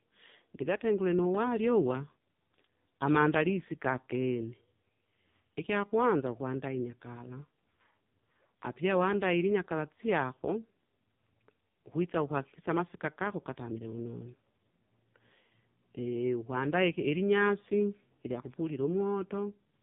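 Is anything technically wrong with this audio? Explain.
Yes. The speech carries AMR narrowband mobile codec damage from start to finish. AMR-NB rebuilds the signal from a vocal-tract model excited by a few pulses per 5 ms subframe, and here the coding is heavy, pointing to one of its lowest modes, around 5.15 kbps. Nothing above about 3.8 kHz survives, so the sound is boxed-in and muffled, and the sparse pulse excitation gives it a buzzy, synthetic, phone-line quality.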